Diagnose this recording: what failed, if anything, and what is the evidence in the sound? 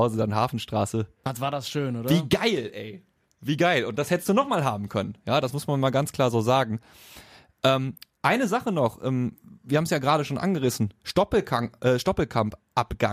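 Nothing in this speech recording points to a failure at any stage of the chain. No event in the sound calls for a diagnosis.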